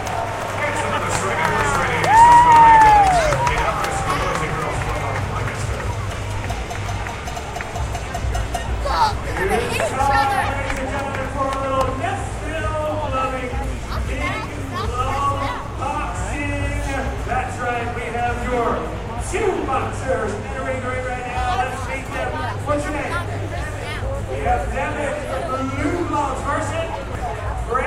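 At 7.35 s, 17.25 s and 27.15 s the sound skips forward by about a tenth of a second, likely audio missing between chunks as a 10-second recording block closes. Unlike a dropout, no silence fills the gap, and the even 9.9-second spacing gives it away.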